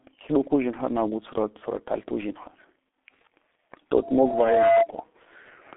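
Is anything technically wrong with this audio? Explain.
Yes, there are two faults.

Throughout, the speech carries heavy G.723.1 codec damage: muffled and hoarse, with smeared consonants, and confined to roughly 250 Hz to 3.6 kHz. The 30 ms frames and slowly updated voice model fit a rate near 6 kbit/s. Plain band-limiting would narrow the sound without this roughness.

From 4.02 to 4.88 s there is a loudspeaker feedback squeal at 678 Hz. The microphone re-amplifies its own loudspeaker output until that one frequency runs away. It swells over most of a second to somewhat above the speech level, which sets it apart from a steady hum.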